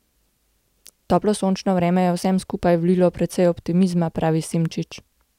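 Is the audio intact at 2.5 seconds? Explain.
Yes, at 2.5 s the speech plays through cleanly, with no dropout, click, distortion or other fault to be heard at that moment.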